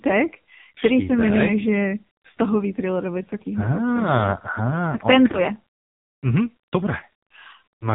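It's a speech clip that's been through the AMR narrowband mobile codec, and it's been squeezed hard. Nothing above 4 kHz survives, so the voice has that boxed-in phone sound. The buzzy, synthetic edge points to one of the lowest AMR-NB modes, something around 5.9 kbps. At that rate the vocal-tract model only gets a handful of pulses per subframe to work with, so the natural texture of the voice gets replaced by a coarse approximation. On top of that there are two lost AMR speech frames. The first is a short dip and warble from about 5.32 to 5.38 s, and the second is a similar blip from about 7.00 to 7.02 s. Each sounds like a single dropped 20 ms frame. When a frame fails its checksum, the decoder fills in by reusing the last good pitch and spectral settings at a lower gain. That's why you hear a smeared wobble rather than a hard gap, and the voice sounds a bit rough for a moment as it picks back up.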